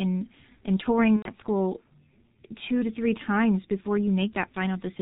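The whole thing runs through G.723.1 at around 6.3 kbit/s, and the codec damage is heavy. Nothing gets through above 4 kHz, so it's muffled and hoarse, and the slow-updating voice model smears the consonants together.

Right after "and touring", from 1.16 to 1.30 s, there's VoIP packet loss concealed by the speech codec. Roughly 90 ms went missing, which fits three lost 30 ms frames. The decoder stretches the last sound into a fading buzzy tone or coloured noise, then mutes on the third frame, and it comes back weak or distorted for a bit afterwards.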